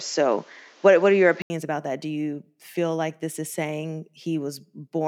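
A speech clip whose first 1.5 s sound duller and boxier, with nothing above 7.6 kHz, a different noise floor and a level step of several decibels; an 80 ms silence precedes "about that", where the band opens up. Likely an input switched to a poorer device. A spectrogram shows a flat ceiling, and the waveform a gap.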